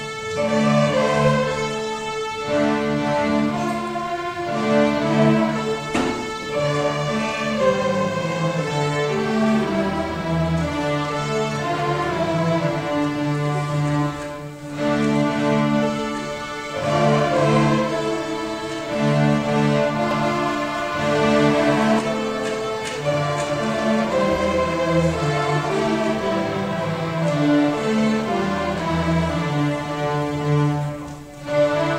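From 20.11 to 21.99 s, a second full-band copy of the sound trails around a fifth of a second behind, about as loud as the original, with no decay, cutting in and out abruptly: a doubled audio track, likely from a slower capture path mixed back in.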